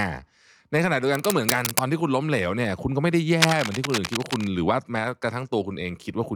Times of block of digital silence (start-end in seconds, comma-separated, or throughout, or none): none